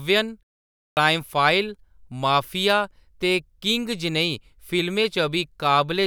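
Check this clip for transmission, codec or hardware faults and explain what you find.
One fault is audible: a clipped start after a pause. At 0.87 s, after about half a second of silence, the output device seems to have gone idle. It needed roughly 0.1 s to wake. That first 99 ms was lost, so speech bursts in abruptly, missing its opening sounds.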